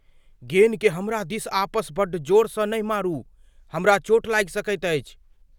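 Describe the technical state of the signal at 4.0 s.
At 4.0 s the speech signal is intact, with no dropout, distortion or other fault to be heard at that moment.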